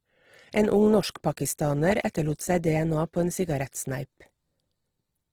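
Throughout the speech, Opus compression in its CELT music mode has likely run short of bits, as a rate near 16 kbps would, so it fills bands with folded or noise energy. The band still reaches 20.4 kHz, but tones sound plainly grainy, rough and noisy.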